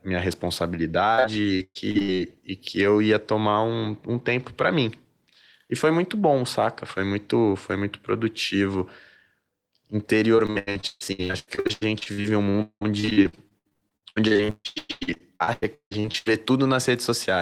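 Repeated packet loss (robotic sound) from 1.15 to 2.20 s, before "e que eu ia", and again from 10.36 to 16.28 s: packets kept dropping and each hole was filled by stretching the preceding sound. The speech turns choppy, with about 37% and 46% of each span patched and gaps up to 115 ms and 193 ms.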